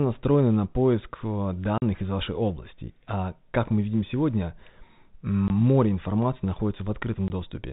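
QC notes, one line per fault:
1.78–1.82 s, packet loss filled with silence: a 40 ms dropout right after "на поиск а", before "из вашей области". The receiver dropped what fits two 20 ms packets and played silence in their place, so the audio stops dead with hard edges.
5.48–5.50 s, packet loss filled with silence: a 20 ms hole, likely one lost packet, same abrupt hard edges.
7.28 s, packet loss filled with silence: another single 20 ms gap with sharp edges.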